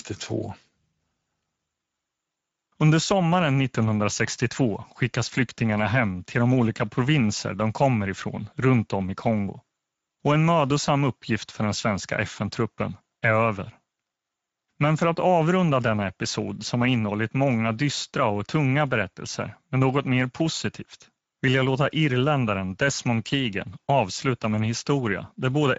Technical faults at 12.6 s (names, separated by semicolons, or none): Speex codec